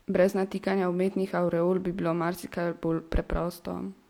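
No technical faults are audible.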